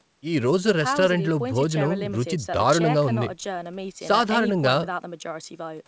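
No technical faults can be heard in this speech recording. It has the band limit of call microphone processing and G.722 wideband telephone coding at 64 kbit/s, with nothing above 8 kHz and at most a faint trace of the coding.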